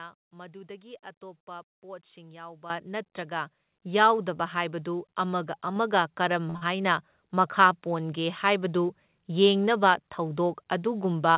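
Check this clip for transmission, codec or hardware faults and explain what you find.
Four kinds of fault are audible in this speech, all sitting on top of a narrowband call path with nothing above 4 kHz, which fits G.711 mu-law at 64 kbps.

Microphone volume stepped up, at 2.7 s, 3.72 s and 5.76 s. The call software judged the microphone too quiet and raised the device's input volume in single jumps of about 11 dB, about 5 dB and about 3 dB. The first lands between "ꯃꯗꯨꯗꯒꯤ ꯑꯇꯣꯞꯄ ꯄꯣꯠꯁꯤꯡ" and "ꯅꯠꯇ꯭ꯔꯒ ꯌꯥꯎꯗꯕ ꯍꯥꯏꯕꯗꯨ ꯑꯃꯒ", the second just before "ꯌꯥꯎꯗꯕ ꯍꯥꯏꯕꯗꯨ ꯑꯃꯒ", and the third right after "ꯅꯠꯇ꯭ꯔꯒ ꯌꯥꯎꯗꯕ ꯍꯥꯏꯕꯗꯨ ꯑꯃꯒ". Because the device gain changed, voice and background get louder together at each step.

Short stall from a late packet, from 6.5 to 6.57 s. A packet arrived after it was due, and the jitter buffer emptied. The receiver stretched the last sound for 48 ms until the packet turned up, then carried on from the same point. 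Nothing is lost, but the sound is held too long, with a slight buzz or dip, and the playout delay grows by 48 ms.

Short concealed packet loss, from 6.57 to 6.63 s, directly after that stall. About 40 ms of audio never reached the decoder in time. The receiver covered the gap with 43 ms of synthesised continuation built from the preceding sound, then blended back into the real signal. The result is a brief smear or wobble in the speech.

Jitter buffer speed-up, from 11.12 to 11.37 s, at the very end. Too much audio had built up in the buffer, so the receiver cut out short pitch-period-sized pieces, about 40 ms in total, to reduce the delay. Playback runs at roughly 114 % speed while the pitch stays the same, so the closing speech sounds hurried.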